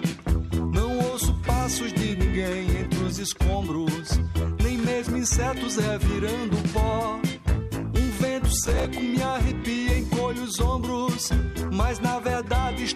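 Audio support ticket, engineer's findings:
Processor overload crackle, 8.64 to 8.85 s. Burst of gritty tearing riding on the sound, stops cleanly at 8.85 s. Component: audio processing thread/CPU load. Many short buffers, roughly 5 ms each, miss their deadline in a row, a dozen or more. Each missed slot replays stale audio with hard edges. Unlike a single dropout, it is a dense run of repeated fragments, not one gap.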